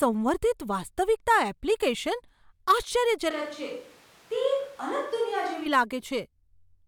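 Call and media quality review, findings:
Speech turns roomy and hollow, thinner bass, level down about 5 dB, room noise up to about 25 dB below speech, 3.31–5.66 s, abrupt both ways. Switch to a distant microphone, likely close-mic dropout with fallback to a far pickup.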